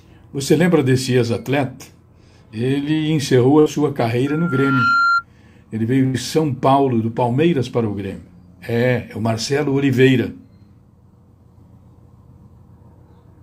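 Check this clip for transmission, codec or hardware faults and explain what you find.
Three faults are present: two bursts of packet loss and one loudspeaker feedback squeal.

Burst of packet loss, at 3.59 to 3.68 s and again at 6.06 to 6.16 s. Packets went missing, so the receiver extended the last sound for about 64 ms and 82 ms, fading it down. Playback then resumes with roughly 60 ms and 80 ms of audio absent.

Loudspeaker feedback squeal, from 4.26 to 5.25 s. The microphone is picking up its own loudspeaker, and loop gain exceeds one at 1.4 kHz. That tone swells over about 0.7 s into a steady squeal roughly as loud as the programme audio.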